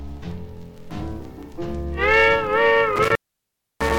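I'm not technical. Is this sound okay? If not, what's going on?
No. At 2.96 s there's an intermittent contact, a loose cable or plug briefly opening. The sound crackles, then drops out for about 0.65 s, leaving faint hiss.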